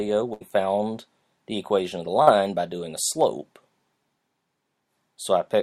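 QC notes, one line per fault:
0.33–0.43 s, burst of packet loss: roughly 80 ms of audio went missing in one go. The receiver carried the last bit of sound forward for about 72 ms, fading it down, then jumped ahead, so you get a smeared hold and a skipped chunk.
2.23–2.29 s, short concealed packet loss: a brief 40 ms hole, patched by extending the preceding sound for about 43 ms and blending back into the real signal. It comes across as a quick smear or wobble rather than a clean cut.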